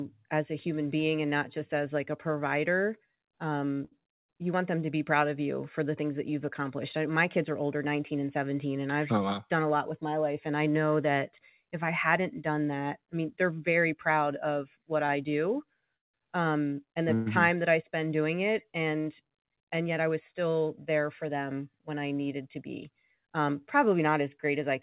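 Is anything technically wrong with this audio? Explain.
Yes, there are three jitter buffer faults in this speech, heard over a narrowband call path with nothing above 4 kHz, which fits a G.711 mu-law codec.

Short stall from a late packet, 3.85 to 3.93 s: a packet arrived late, the jitter buffer ran dry, and the receiver stretched the last sound for 66 ms before resuming where it left off. Nothing is lost, unlike a dropout. The sound is briefly held with a slight buzz or dip.

Repeated stalls (stutter), 15.07 to 17.28 s: packets kept arriving late, so the buffer emptied four times and 321 ms of stretched sound was inserted. That is about 14 percent of the span, and the longest single fill is 170 ms. Repetition is what separates this from the single stall: the speech drags and stutters.

Jitter buffer speed-up, 19.21 to 20.34 s: with too much audio queued, the receiver trimmed short pitch-period pieces, roughly a tenth of a second in total. 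Playback runs at 108 percent with unchanged pitch, so the speech sounds hurried rather than held.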